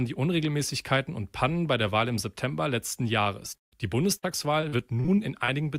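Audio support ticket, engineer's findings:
Short concealed packet loss, 3.23 to 3.27 s: single brief smear or wobble, about 20 ms of audio missing. Jitter buffer or network drop; decoder concealment extended the last sound briefly. One isolated gap, too short for an audible fade.

Burst of packet loss, 4.17 to 4.25 s: held buzz or fading hiss, then audio resumes with about 60 ms skipped. Consecutive packets lost or late; concealment extended and attenuated the last sound. Longer than the 3.23 s event, with audible decay.

Repeated packet loss (robotic sound), 4.61 to 5.50 s: choppy stretch with six gaps, longest 40 ms, about 160 ms missing in total. Sustained network loss, each hole patched by concealment. Dense recurrence, not one gap, gives the robotic texture.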